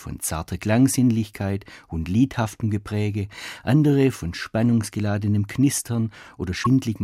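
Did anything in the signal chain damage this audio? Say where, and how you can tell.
Yes. At the codec stage, near the end of the speech, from 6.62 to 6.67 s, the audio jumps forward and the first frames after the cut decode as a brief glitch. The likely cause is a broken MP3 bit reservoir: frames were cut out, so the next frame reached back for borrowed bytes and decoded another frame's data. The roughly 44 ms disturbance spans about two frames of 26.1 ms. Unlike network concealment, it is decoded from the wrong data rather than a smeared repeat.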